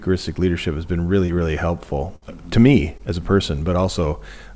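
At 1.26 to 1.30 s, the speech has a short concealed packet loss. About 20 ms of audio never arrived in time. The receiver filled roughly 19 ms of it by extending the last sound, then blended back into the real signal. It comes across as a brief smear or wobble, and a quick consonant there can disappear. The same fault recurs at 2.98 to 3.01 s. About 20 ms went missing, and only around 13 ms was filled before the crossfade. It makes a similar tiny blur.

From 2.16 to 2.24 s there is a burst of packet loss. About 60 ms went missing in a row. For roughly 59 ms the receiver kept the last sound going and let it fade. A voiced stretch turns into a held buzz, and anything else into a dying hiss. When the speech resumes, the part in between is simply gone. Through all of this, nothing reaches above 8 kHz, which fits a G.722 call codec.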